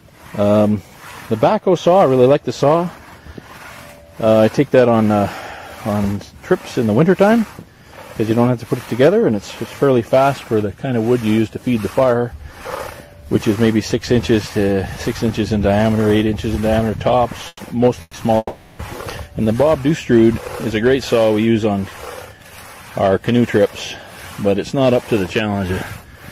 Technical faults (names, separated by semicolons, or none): burst of packet loss; long network dropout